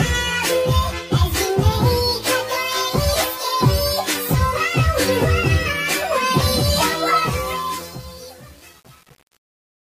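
From 7.14 s to the end, the fade-out, which starts around 7 s, shows truncation distortion. The level stage keeps too few bits and adds no dither, which fits a 7-bit path. From 7.18 s the tail turns into coarse steps, sounding gritty.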